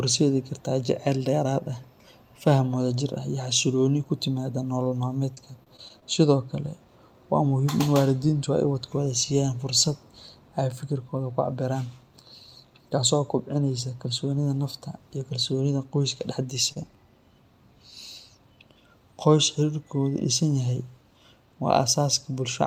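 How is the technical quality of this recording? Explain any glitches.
The recording has network delivery faults at three points in the speech: two short stalls, a burst of packet loss and a buffer slow-down.

At 4.83 to 4.89 s there is a short stall from a late packet. A packet arrived after it was due and the jitter buffer ran dry, so the receiver held the last sound for about 23 ms before resuming. Nothing is lost, but the sound briefly sticks.

From 5.35 to 6.04 s, repeated packet loss gives a robotic sound. Six separate gaps, the longest 30 ms, were each patched by extending the preceding audio. About 80 ms is missing in total, and the stretch comes across as choppy and robotic.

From 16.41 to 16.97 s, a jitter buffer slow-down stretches the audio. The receiver repeated short pitch-period segments to rebuild its reserve, adding about 42 ms. The passage runs at about 94% speed with the pitch unchanged and sounds slightly drawn out.

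At 16.72 to 16.78 s, inside the slow-down, another short stall from a late packet holds the sound for about 35 ms before the late packet arrives. No audio is lost, but there is a momentary freeze.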